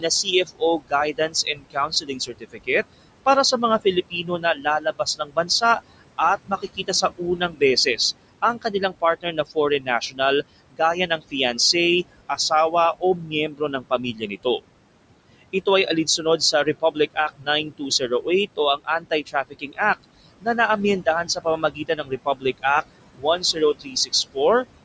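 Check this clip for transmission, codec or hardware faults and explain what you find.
The clip shows one processing fault: an aggressive noise suppressor running for its whole length, which also eats into the speech in five stretches.

Noise suppressor artifacts, throughout: the suppressor tracks the steady room noise, which sits only about 14 dB below the speech, and pulls those bands down by about 21 dB frame by frame. The background drops away in the gaps and swells back whenever speech starts. Nothing above 8 kHz comes through, which fits the call's microphone processing.

Speech cut by the noise suppressor, at 0.00–2.69 s, 3.84–11.74 s, 12.29–14.65 s, 15.42–20.47 s and 21.01–24.65 s: within these stretches the suppressor mistakes quieter speech energy for noise and applies the same cut of up to about 21 dB. Soft consonants and word endings sink with the background, adding up to roughly a second in most stretches and around two seconds in the longest. 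Those sounds come across swallowed or faint.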